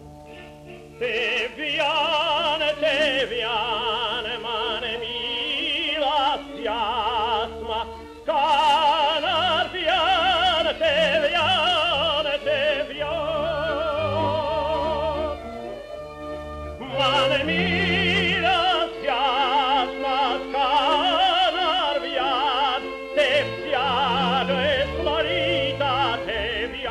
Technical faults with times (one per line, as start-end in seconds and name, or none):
none